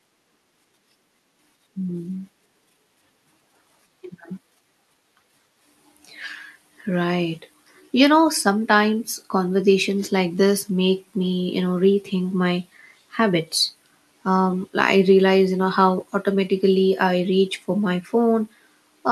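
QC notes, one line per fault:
No audible faults found in this speech recording.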